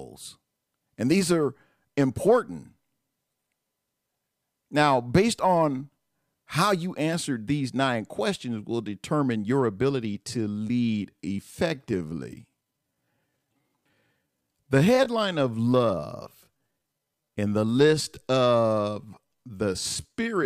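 At 10.19 s the speech abruptly slows to 0.7 times its original pace and stays that way to the end of the clip, while the pitch does not drop. From that point the speech drags, with syllables drawn out. This is a time-stretched section, likely produced by software lengthening the audio to fit a target duration and preserving pitch by repeating short fragments of the waveform.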